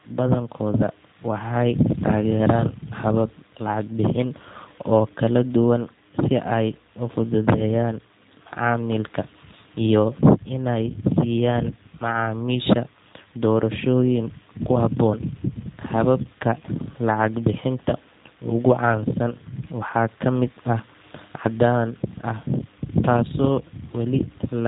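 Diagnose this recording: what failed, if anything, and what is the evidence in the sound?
G.729 codec damage runs through the whole speech recording, a codec-stage fault. Nothing passes above about 3.8 kHz, and the voice sounds plainly rough and synthetic, which points to 8 kbit/s coding that rebuilds each frame from a vocal-tract filter, pitch predictor and sparse pulses.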